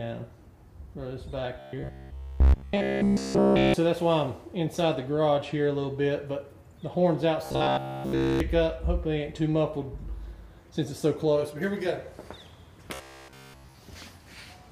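A rigid, metallic buzz at 66.7 Hz is heard from 1.59 to 3.74 s, 7.46 to 8.40 s and 12.94 to 13.79 s. This robotic sound from repeated short buffers likely comes from a 15 ms chunk replayed over and over, with almost no new audio getting through.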